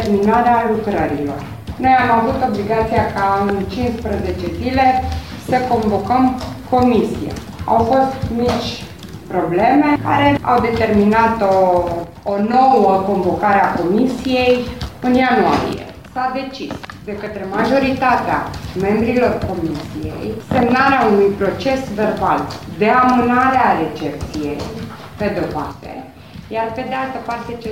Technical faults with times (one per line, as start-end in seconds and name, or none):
12.04-12.54 one channel drops out
15.73-17.58 one channel drops out
25.72-27.71 one channel drops out